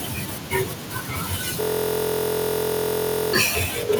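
From 1.61 s to 3.33 s a system hang loop stalls the speech: the driver froze while the hardware replayed one 23.22 ms slice, which fits a 1024-sample buffer, heard as a 43.1 Hz buzz. The waveform shows identical repeating blocks; the spectrogram, lines 43.1 Hz apart.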